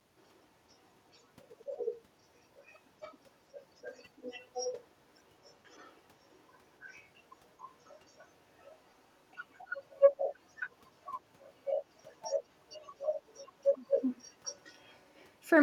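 Echo leak at 1.14–2.01 s, 2.59–4.85 s, 5.44–7.04 s, 7.85–8.75 s and 9.36–15.27 s: a copy of the speech trails 268 ms behind, about 15 dB down at first, barely audible in the middle two spans, then stronger, about 10 dB down. It is likely residue that a far-end echo canceller failed to remove.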